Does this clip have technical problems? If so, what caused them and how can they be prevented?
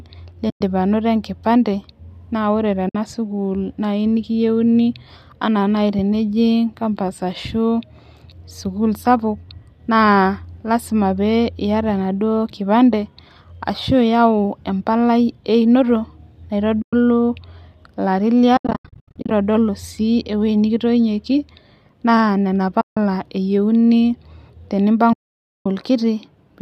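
Yes. AAC frame loss with muting causes soft-edged dropouts at 0.50–0.61, 2.89–2.95, 16.82–16.93, 18.57–19.31 (scattered gaps, longest about 0.1 s), 22.81–22.97 and 25.13–25.66 s. The decoder zeroes the lost frames, and the overlapping windows fade the sound out and back in. Forward error correction or packet-loss concealment on the likely low-delay AAC link would prevent them.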